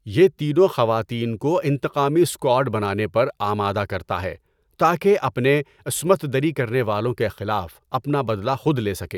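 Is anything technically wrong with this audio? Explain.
No, nothing is technically wrong with this audio.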